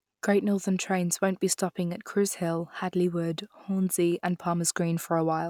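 No technical faults are audible anywhere in the speech.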